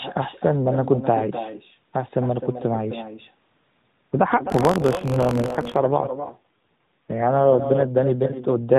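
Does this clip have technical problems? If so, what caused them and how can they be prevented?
Yes. The clip has three faults, heard over narrowband speech that carries nothing above 4 kHz.

The first is echo with no canceller, and it runs through the whole clip. Each phrase returns roughly 300 ms later as a thinner copy about 10 dB below the direct speech. The far end is playing the call through a loudspeaker, and its microphone sends that sound straight back across the network with nothing subtracting it. Running acoustic echo cancellation at the far-end device, or having that side use a headset, prevents it.

The second is an AMR rate drop from 4.34 s to 7.84 s. The bandwidth stays the same and there is no gap, but the speech becomes rougher and more synthetic. This fits the codec falling from its 12.2 kbps mode to 5.9 kbps, which happens when the network moves bits from speech into error protection on a weak radio link. 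It ends when the higher rate returns. Better radio coverage or signal strength at the mobile end prevents the downswitch.

The third is buffer tearing from 4.48 s to 5.77 s. It overlaps the rate drop and is heard as a steady robotic buzz at about 47 Hz, present only while speech is sounding. That rate fits a 1024-sample buffer at 48 kHz. The writer and reader of the ring buffer have slipped, so a small slice of each period, a few percent, holds audio from roughly 70 ms earlier, with hard joins at both edges. Correct buffer pointer synchronisation, with enough headroom to resist scheduling delays, prevents it.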